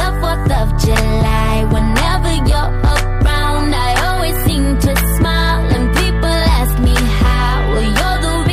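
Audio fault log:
throughout, hard clipping: the signal is driven about 5 dB past what the stage can pass, so peaks are sliced flat, affecting a few percent of samples. The squared-off tops generate high-frequency harmonics, heard as crackle and grit on each loud moment.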